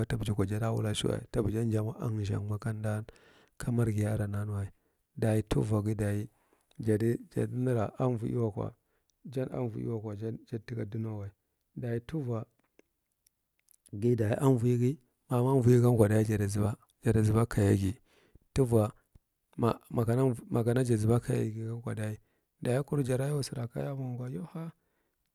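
No technical faults can be heard anywhere in the recording.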